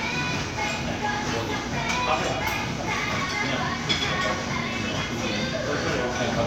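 Nothing stood out as a technical problem when listening to this recording of sounds.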